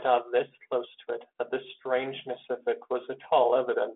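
No technical faults are present: the speech comes over a G.726 ADPCM telephone path at 32 kbit/s that behaves as it should, with the usual line band of roughly 250 Hz to 3.5 kHz, nothing above 3.8 kHz, and only a light coding texture.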